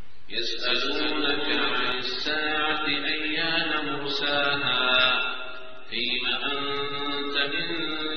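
From the very start until 1.92 s, a doubled audio track is present: a second full-band copy trails about 300 ms behind, some 5 dB quieter, with no decay or room colour, then cuts off abruptly. The likely cause is a slower capture path.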